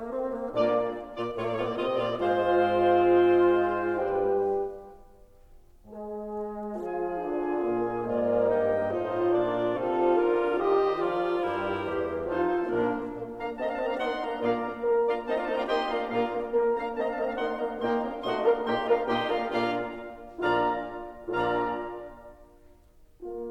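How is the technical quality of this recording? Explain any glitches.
Nothing in this music recording stood out as a technical problem on listening.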